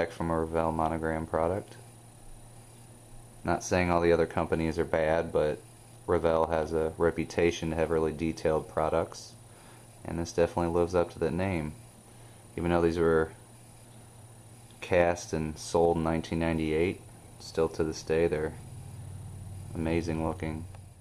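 No faults found anywhere in the clip.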